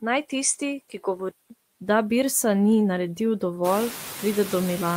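From 0.0 to 1.5 s the audio sounds duller and a little quieter, with a narrower band and its own faint background noise well under the signal. That's likely the input switched to a poorer device, and there's a 188 ms silence at the changeover around 1.5 s.

Noise suppressor artifacts run through the whole clip. The background is pulled down by about 12 dB between phrases, then comes back up under the speech, so the noise floor pumps. The room noise rises by about 19 dB around 3.5 s.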